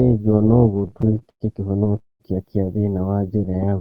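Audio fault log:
Throughout, overlap-add ripple: level swells and dips about 6 dB roughly 200 times a second, a metallic buzz with extra tones around each note; waveform envelope shows regular scalloping, spectrogram fine vertical banding.
0.71–1.99 s, repeated stalls (stutter): 23 short holds filled with continued sound, longest 107 ms, about 28% of the span, so the audio drags; spectrogram shows smeared, repeated patches.
1.99–2.22 s, call audio freeze: sound hangs then fades to near silence for about 180 ms before "kia thĩna wa", likely a jitter buffer running empty; waveform shows a flat gap.
3.38–3.78 s, jitter buffer slow-down: after "kia thĩna wa", repeated pitch periods add 73 ms, running at 84% speed, same pitch; spectrogram harmonics stretch horizontally.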